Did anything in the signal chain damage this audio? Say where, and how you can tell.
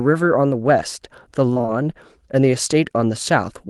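Yes. The damage happens on the network stage, from 1.53 to 1.70 s. It is repeated packet loss, heard as a choppy, robotic stretch. Four short gaps, the longest 25 ms, were each patched by extending the previous sound. Those patches fill about half of that span.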